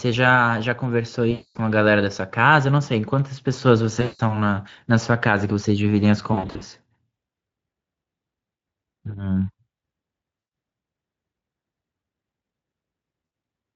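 VoIP packet loss concealed by the speech codec breaks up the speech at 1.31–1.58 s, 4.01–4.21 s, 6.33–6.62 s, 10.39–10.51 s and 13.25–13.31 s. In each gap the decoder repeats its last pitch and filter at falling gain, smearing syllables into a buzzy tone or coloured noise that fades. At 6.33 s the losses are scattered bursts of at most 40 ms. A spectrogram shows harmonics frozen into flat, dimming stripes, and the waveform shows a repeating, decaying cycle. Speex coding at 27.8 kbps adds slight roughness underneath.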